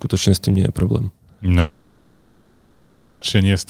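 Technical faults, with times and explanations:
1.59–3.23 s, long network dropout: after "tým nie je problém" the speech cuts off, and about 1.6 s is filled with a fading, buzzy continuation of the last sound, likely from concealment of lost packets. The spectrogram shows smeared, decaying bands and the waveform a shrinking, featureless envelope; speech resumes with that stretch gone.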